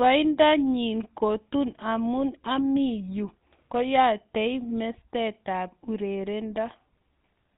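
A buzzy, gravelly roughness runs through the whole speech with nothing above 4 kHz, the GSM full-rate codec's pulse-driven vocal-tract model, which fits a 13 kbps stream.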